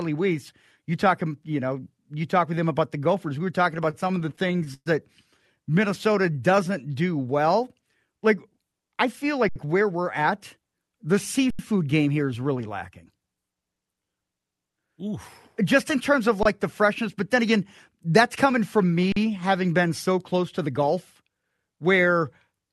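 From 3.77 to 4.88 s, just after "were talking", the audio falls into repeated stalls (stutter). The jitter buffer ran dry 15 times because packets came in late or too slowly, and each time the receiver stretched the last sound until it could continue. About 263 ms was filled this way, roughly a quarter of the span, and nothing was lost. The longest wait was 119 ms, long enough for the fill to fade. The result drags and hiccups. On a spectrogram the span shows short smeared, repeated slices where the harmonics freeze; on the waveform the repeated cycles sit side by side, thinning where the fill fades.

From 6.12 to 6.78 s, just before "do well", a jitter buffer slow-down adds about 80 ms. The receiver repeated single pitch periods to rebuild its reserve, so the speech plays at 89% speed at unchanged pitch, drawn out. The spectrogram shows harmonics at normal spacing but syllables stretched in time; the waveform shows runs of near-identical cycles.

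A jitter buffer speed-up runs from 8.80 to 10.65 s at 106%, removing roughly 100 ms, and again from 20.58 to 21.31 s at 106%, removing about 50 ms. The receiver cut out short pitch-period pieces to shrink an oversized buffer, so the speech sounds hurried while keeping its pitch. Syllables look compressed on the spectrogram, and the waveform has periods quietly spliced out.

Underruns with held samples occur at 9.49 s (69 ms, inside the first speed-up), 11.50 s (85 ms, before "game here is really", which fits a 4096-sample buffer), 16.43 s (23 ms) and 19.12 s (43 ms, which fits a 2048-sample buffer). The output buffer emptied and the converter held its last value, so the sound stops dead with little or no click. Playback resumes where it left off, so the restarts are soft. Each shows as a flat line on the waveform and a blank vertical band on the spectrogram. Across the whole clip the spectrogram has a ceiling near 12 kHz from the Opus call path.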